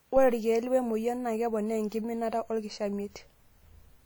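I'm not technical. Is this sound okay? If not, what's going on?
No. WMA compression damage runs through the whole clip, from the first second to the last. The speech sounds washy and ringing, with a hiss that swells and fades along with the voice. This is likely the result of saving the audio with a Windows Media Audio encoder at a fairly low quality setting. That kind of encoder processes sound in longish chunks, so its errors smear over nearby moments and blur the clean edges of the speech.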